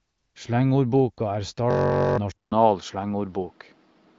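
From 1.71 to 2.18 s a system hang loop repeats one 21.33 ms slice, which fits a 1024-sample buffer, as a steady 46.9 Hz buzz, losing about half a second of speech. At 2.32 s, after a 200 ms silence, the sound turns dull to the end, with nothing above 6 kHz and a faint new noise floor at much the same level. This is likely the input switched to a poorer device.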